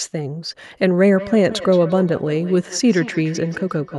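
Feedback echo between two devices runs from 1.12 s to the end of this speech clip. Each stretch of speech returns roughly every 150 ms, its repeats peaking about 15 dB below the direct sound. The repeats come from a second device in the same room playing the far side of the call aloud into a nearby microphone. That microphone's echo canceller removes only its own device's playback, so the re-captured sound goes back into the call.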